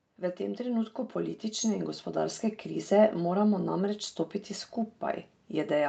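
Automatic gain rising runs from 0.17 s to 2.97 s in this speech clip. The gain control judged the input too quiet and raised its level gradually, by about 9 dB, so voice and background swell together. The call path also limits the audio to 8 kHz.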